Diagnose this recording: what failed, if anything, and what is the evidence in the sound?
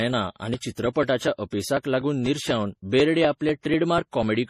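At the codec stage, the speech shows two layered sets of compression artefacts with nothing above 13.9 kHz, likely transcoding between lossy codecs: AAC then MP3, with mixed artefact textures unlike a single encode.

At the driver or buffer stage, ticks recur every 0.246 s from 0.29 to 4.23 s as about 4 ms is skipped, marking periodic USB or driver dropouts. Their strict regularity distinguishes them from irregular network loss.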